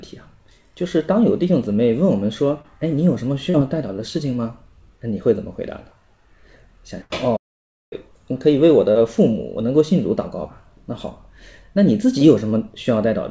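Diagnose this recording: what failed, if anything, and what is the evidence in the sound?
Short concealed packet loss at the network stage: brief smears or wobbles at 2.62–2.66, 3.50–3.56, 8.92–8.97 and 12.19–12.23 s. Each fills roughly 20 to 40 ms by extending the last sound, then blends back. Unlike a burst, nothing fades away.

Burst of packet loss, also at the network stage, at 7.02–7.12 s: about 80 ms of consecutive audio went missing. The concealment holds the preceding sound as a buzz or hiss that dies away, and the audio resumes further on. This is longer and fading, not a smear.

Playback stall from 7.36 to 7.93 s: the output goes completely silent for about 0.55 s and then continues. This is likely a starved or blocked playback buffer. It is true silence rather than a held, decaying sound, which separates it from concealed loss on the G.722 path, whose band stops at about 7 kHz.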